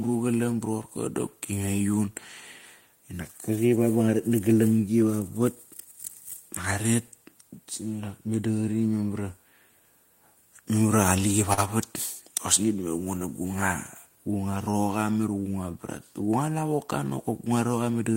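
At 11.53 s the speech hits a short stall from a late packet. The jitter buffer ran dry, so the receiver held the last sound for about 40 ms until the packet showed up, then picked up where it left off. You hear a brief drawn-out sound with a faint buzz or dip. Nothing is lost, and everything after it runs 40 ms later.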